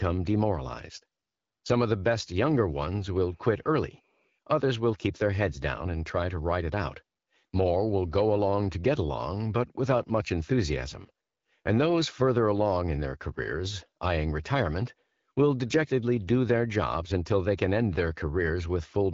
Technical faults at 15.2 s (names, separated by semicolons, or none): none